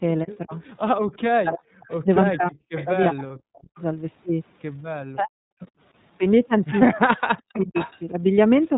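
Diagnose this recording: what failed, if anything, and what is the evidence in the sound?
The codec stage is at fault throughout. The speech carries iLBC codec damage, plainly audible as a rough, slightly synthetic edge. Nothing above 4 kHz survives. The narrowband coding fits a 13.33 kbps mode with 30 ms frames, each coded on its own.

Call processing failed in three stretches: 0.24 to 3.79 s, 5.14 to 5.62 s and 7.09 to 8.16 s. The speech dips by up to about 40 dB or drops out in pieces. This is likely speech suppressed in double talk. The echo canceller could not tell the talker from loudspeaker echo and attenuated both.

The network stage shows lost iLBC frames at 1.59 s and 3.27 s, each 30 ms long. Each gap becomes a brief held, faintly buzzy sound. The decoder repeats the last pitch cycle with added noise. Because frames stand alone, the speech recovers immediately.

A delayed copy of the speech returns three times. 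It comes at 1.83 to 2.86 s, about 382 ms late and about 15 dB down. It comes briefly at 5.62 s, about 30 dB down. It comes at 7.37 to 7.99 s, about 405 ms late and about 10 dB down. This is likely an echo leak, where a loudspeaker's residual echo slipped past the far end's canceller.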